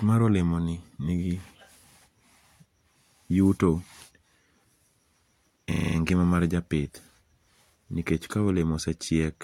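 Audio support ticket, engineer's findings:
System hang loop, 5.72–5.96 s, just before "ngima mar": one 40 ms slice of speech repeats exactly six times, giving a 25 Hz rattle. The driver stalled while the output ring buffer kept cycling. Unlike a dropout, essentially no audio goes missing.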